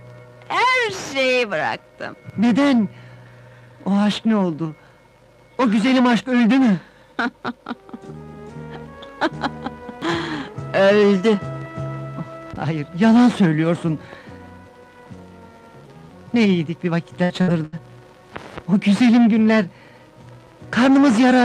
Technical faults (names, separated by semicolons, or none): burst of packet loss